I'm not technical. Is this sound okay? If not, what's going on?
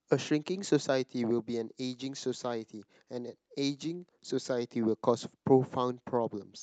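No. There is clock drift between sender and receiver. The sending device's clock ran slightly slow, so the receiving side kept getting sound a little late.

This caused repeated timing corrections from 0.02 to 6.05 s. Small pieces were repeated to fill gaps. The speech plays about 2% slow, stretched by roughly a tenth of a second.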